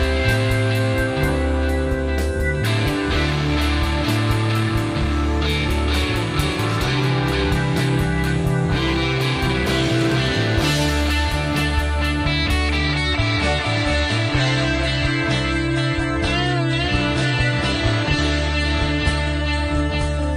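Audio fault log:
12.77 to 20.36 s, adaptive stream at a lower bitrate: the quality drops abruptly with no gap, as the stream switches to a lower-bitrate version, which points to AAC at around 24 kbit/s instead of 96. Codec artefacts increase, and nothing remains above 10 kHz.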